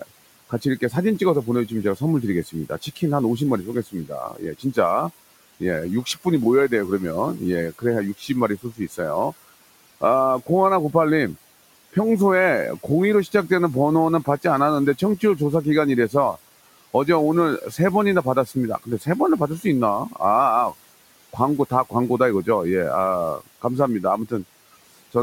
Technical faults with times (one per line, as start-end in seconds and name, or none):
0.00-25.22 noise suppressor artifacts
0.00-10.49 speech cut by the noise suppressor
11.93-16.37 speech cut by the noise suppressor
17.62-25.15 speech cut by the noise suppressor